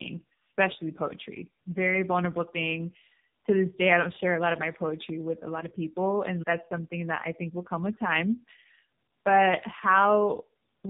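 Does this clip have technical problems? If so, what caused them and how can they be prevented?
Yes, there's tandem speech coding running through the whole clip. The speech sounds rough, a bit muffled and warbly, with nothing above about 3.7 kHz. That points to two low-rate speech codecs in a row, something like a G.729A leg handed through a G.711 link and then squeezed again by AMR-NB at a low mode. Each coder re-encodes the previous one's artefacts, so the damage stacks. To prevent it, keep the call in one codec end to end, using transcoder-free operation or codec negotiation so it's never decoded and re-encoded at the link borders.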